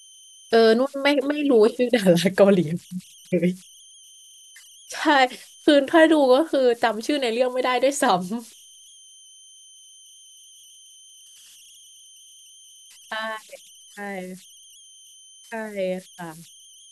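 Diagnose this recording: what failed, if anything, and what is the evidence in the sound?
The converter stage failed. Converter idle tones run throughout the speech as a tone around 3 kHz, about 29 dB below the signal. An undithered delta-sigma modulator falls into repeating bit patterns at low input. A spectrogram shows a horizontal line near 3 kHz through pauses.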